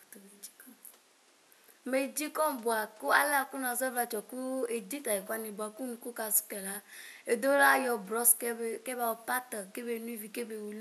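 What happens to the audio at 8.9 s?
Nothing goes wrong at 8.9 s: the speech carries on intact, with only the room's own background noise sitting about 32 dB below it.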